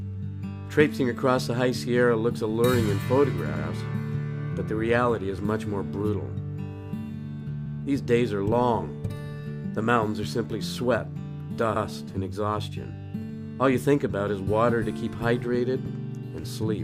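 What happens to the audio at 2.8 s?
Nothing goes wrong at 2.8 s: the audio plays through that moment intact, with no dropout, click or other fault to be heard.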